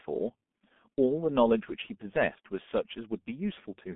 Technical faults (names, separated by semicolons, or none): G.723.1 codec